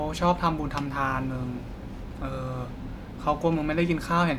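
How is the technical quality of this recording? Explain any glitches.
No technical faults are audible anywhere in the recording.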